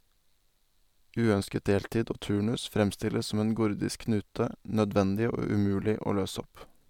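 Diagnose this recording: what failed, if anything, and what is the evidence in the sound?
No failure is audible at any stage of the chain in this speech recording.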